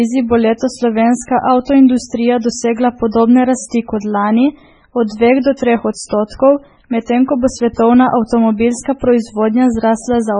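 Throughout the speech, heavy MP3 compression is the likely cause of a watery, swirling quality and missing treble above 10.3 kHz, which fits a bitrate near 16 kbps. Unlike a simple low-pass filter, the damage flickers from frame to frame.

From 7.74 to 7.78 s, just after "medtem ko bo", there is pre-echo: a 38 ms hiss leads into an attack, because the codec spread that block's noise into the quiet before it. Unlike a click, it is soft noise that arrives ahead of the onset, not at it.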